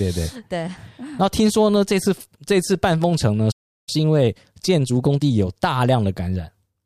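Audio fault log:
3.51–3.89 s, playback stall: The speech stops in mid-flow and the output goes fully silent for about 0.36 s. The sound simply halts, then resumes. The likely cause is that the player ran out of buffered data or its audio thread was held up, so nothing reached the output until it recovered. The gap sounds like a sudden freeze.
3.89–5.31 s, time-compressed catch-up: Right after the stall, the speech runs hurried for about 1.4 s, at roughly 1.25 times normal speed. Pitch stays where it was, so it does not sound like a sped-up tape. The player is working off the backlog left by the stall by cutting out short slices and cross-fading across the joins.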